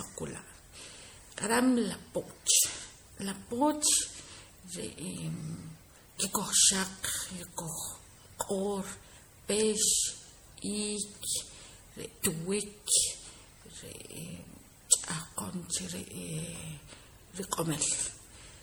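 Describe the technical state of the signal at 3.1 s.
At 3.1 s the speech carries generation loss that runs through the whole clip, likely from MP3 coding near 64 kbit/s repeated about four times, each pass requantising on a shifted frame grid. The accumulated noise and spectral holes make the sound swirly, hollow and smeared, with softened attacks.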